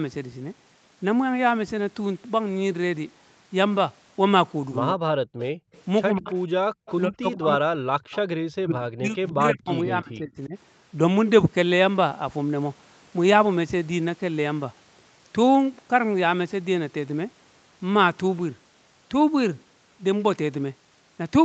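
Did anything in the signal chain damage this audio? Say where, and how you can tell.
Yes, the call processing stage hurt it. Speech suppressed in double talk: the speech dips by about 40 dB at 4.92–5.11 s and 7.08–10.55 s, and by about 30 dB at 6.16–6.29 s. The likely cause is the echo canceller ducking its own talker along with the loudspeaker echo.

There's also an echo leak at 5.39–6.93 s and 8.13–8.17 s: a faint copy trailing by 143 ms, about 20 dB down. That's likely loudspeaker pickup the canceller didn't fully remove.

Background gated by the echo canceller: the room tone drops by about 40 dB at 5.54–5.72 s and 6.67–6.8 s. The canceller clamps the mic, then releases it.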